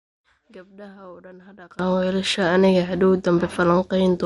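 From the start to 1.79 s the speech drops by about 25 dB, leaving only a weak residue. The likely cause is one channel inverted: with reversed polarity, the content common to both channels cancels in the mono sum, and only their small differences remain.

Throughout the clip there is plainly audible MP3 compression, likely at a low bitrate, which fits roughly 48 kbps. Nothing is present above 11.2 kHz. Starved of bits, the encoder drops weak frequency lines from frame to frame, which gives the speech a watery, swirling texture.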